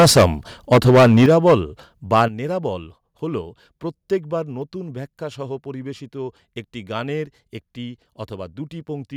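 From 0.00 to 0.26 s the speech is harshly distorted, with peaks about 12 dB past the converter's limit. This is microphone overload, likely from an input level set too high. It flattens roughly 30% of the samples. The same crackle returns from 0.71 to 1.55 s, about 11 dB over.

At 1.26 s the level drops about 10 dB at once. This is the microphone volume stepped down, likely by the call software reacting to the clipping. Milder overload, about 3 dB, follows from 2.13 to 2.22 s. A second step down of about 9 dB comes at 2.28 s, just before "নেরাবল হল প্রত্যেকবার নতুন".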